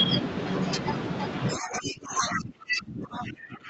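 A speech recording in which, from 1.56 s to the end, the talker's level sinks, falling at its deepest by roughly 25 dB, with the upper frequencies thinning and parts of syllables dropping out in pieces rather than fading smoothly. This is speech suppressed in double talk: the other party was likely talking at the same moment, and the echo canceller, unable to tell the local voice from the loudspeaker echo, attenuated both together. Overlapping that stretch, a second, fainter voice comes through from 1.58 s to 1.96 s and again briefly from 3.16 s to 3.23 s, sitting around 10 dB under the talker. That is the other side's voice leaking through, where far-end audio played over the loudspeaker was likely only partly removed from the microphone signal. The narrowed top end is consistent with an Opus call path.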